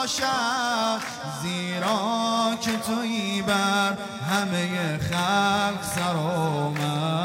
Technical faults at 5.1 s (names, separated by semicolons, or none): none